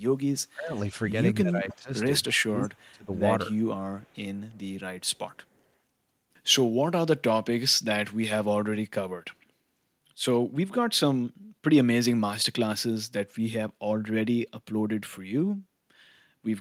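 Speech, with the talker's level repeatedly pushed down in the first few seconds, which is speech suppressed in double talk, likely from an echo canceller ducking its own talker along with the loudspeaker echo. It occurs at 0.41–0.73 s (drop about 25 dB), 1.43–1.91 s (about 15 dB) and 2.28–3.12 s (about 30 dB), and shows on the waveform as sudden hollows in the envelope and on a spectrogram as faded bands. Faint echo leak follows at 0.77, 1.70–1.77, 4.00–4.18, 4.34–4.61 and 5.53–5.61 s: a copy of the speech delayed by 299 ms, about 25 to 40 dB below the direct sound, appearing as weak repeated harmonic traces trailing the originals.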